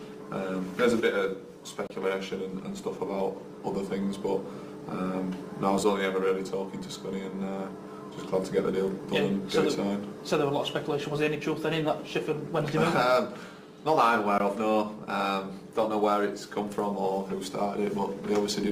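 At 1.87 s and again at 14.38 s the sound drops out abruptly: a 30 ms hole, then a 20 ms one. Both are blocks of digital silence, where samples were replaced by zeros, likely because the output buffer wasn't filled in time.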